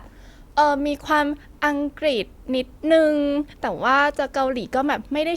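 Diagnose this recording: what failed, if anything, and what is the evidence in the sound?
Nothing failed in this recording. The speech carries no audible defect that would point to a fault at any stage between capture and playback.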